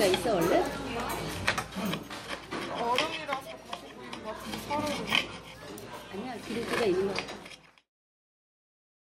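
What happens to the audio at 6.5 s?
The audio is intact at 6.5 s, where a smooth fade-out begins around that point and lowers the level evenly to silence by 7.92 s, with no click or hard edge.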